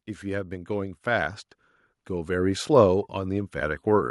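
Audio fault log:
0.21–1.46 s and 2.06–3.90 s, automatic gain rising: the speech and the background noise behind it swell together, each time climbing by about 5 dB over a little more than a second in the first run and nearly two seconds in the second. The automatic gain control judged the input too quiet and pushed its gain up gradually rather than at once, so everything in the signal, wanted or not, gets louder as a slow ramp.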